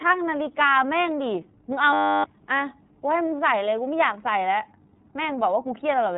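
From start to end the speech passes through the iLBC codec. Nothing above 3.8 kHz survives, and the speech sounds plainly rough and synthetic. The roughness, rather than simple muffling, sets it apart from plain band-limiting. It fits 30 ms frames coded independently at about 13 kbps.

From 1.93 to 2.24 s a system hang loop takes over. The playback froze while the hardware kept replaying one 10 ms slice of its buffer, 31 times over. The result is a steady 100 Hz buzz. Because the repetition is exact, it sounds like a pitched tone rather than a silent dropout or an irregular stutter, and roughly a third of a second of speech is lost.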